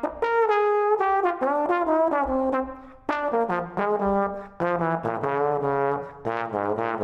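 Nothing is technically wrong with this audio.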